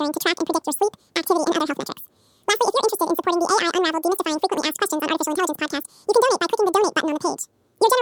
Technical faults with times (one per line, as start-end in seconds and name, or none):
0.00-8.02 audio read two samples at a time (double speed)